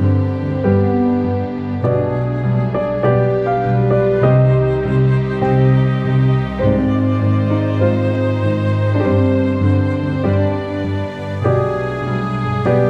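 Listening closely, nothing in the audio stood out as a technical fault at any point.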